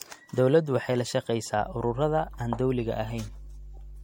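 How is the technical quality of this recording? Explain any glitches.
The recording has two clear faults: lossy-codec damage throughout the speech, and a mains hum that starts partway through.

Generation loss, throughout: the audio was likely re-encoded several times with MP3, at a low bitrate around 64 kbit/s. The result sounds swirly, hollow and smeared, with nothing above 16.6 kHz.

Mains hum, from 1.58 s after "waxay la" to the end: power-line interference at 50 Hz leaks into the signal, producing a steady low drone roughly 15 dB below the speech.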